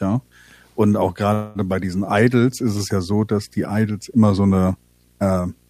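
A steady 60 Hz buzz with a gritty hash riding on top of it sits under the speech for the whole clip, roughly 35 dB below it. This is video or display buzz: a screen or its video cable is coupling interference into the audio path, and the buzz follows the picture's 60 Hz field rate.

From 1.33 s to 1.58 s the speech stops moving forward. The last sound is drawn out into a fading smear for about a quarter of a second before normal speech resumes exactly where it left off, with nothing skipped and no true silence in the gap. This is a call audio freeze, likely caused by packets being held up in transit until the jitter buffer ran dry. The receiver filled the wait with about 217 ms of stretched sound, and everything after 1.58 s arrives that much later than it should.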